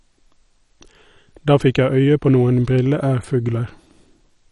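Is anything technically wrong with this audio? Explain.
Yes. Throughout, this speech has MP2 compression artefacts: likely starved of bits (fits about 48 kbps), Layer II drops upper sub-bands, leaving nothing above 11.3 kHz and a dull, gurgly, grainy texture.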